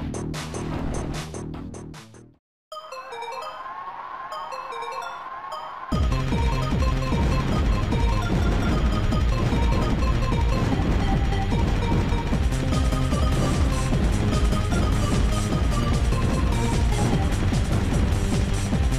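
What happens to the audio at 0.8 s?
At 0.79 s there is a bit error spike: a single sample jumps to about -27 dBFS and immediately returns to the waveform. One bit in that sample's stored or transmitted value has flipped, so the value leaps by a power of two with no relation to the surrounding signal. Because it lasts only one sample, it carries energy across the whole spectrum and is heard as one brief, sharp tick.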